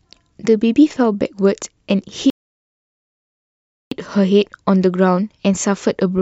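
A speech recording with a rebuffering stall from 2.30 s to 3.92 s: playback drains its downloaded audio, falls silent for about 1.61 s, then picks up at exactly the point where it stopped. That is what separates it from a dropout or packet loss, where the gap swallows part of the speech and the sound resumes further on. Here nothing is missing; the pause only adds time to the clip.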